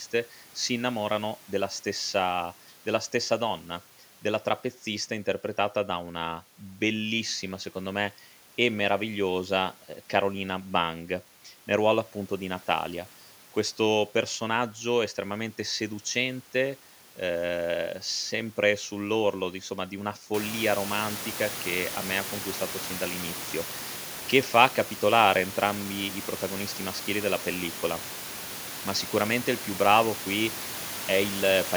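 Nothing stood out on listening to this speech recording, and the room's background noise, which rises by about 18 dB around 20 seconds in and stays well below the talking, belongs to the recording space rather than to the system.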